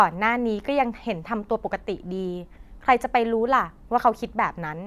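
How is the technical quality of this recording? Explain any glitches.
Listening to the recording, nothing stood out as a technical problem or glitch.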